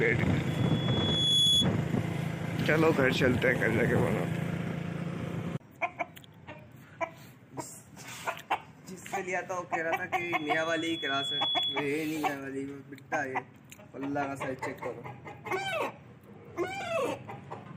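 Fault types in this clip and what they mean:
Loudspeaker feedback squeal: 0.47–1.71 s and 10.2–12.0 s; a 3.4 kHz tone swells over a second or so as the microphone re-amplifies its own loudspeaker.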